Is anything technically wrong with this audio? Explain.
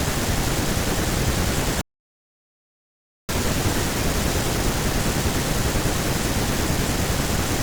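Yes. From 1.81 s to 3.29 s the speech cuts out mid-flow into about 1.5 seconds of dead silence before resuming. This playback stall was likely caused by the player running short of buffered data or having its output thread blocked until it recovered.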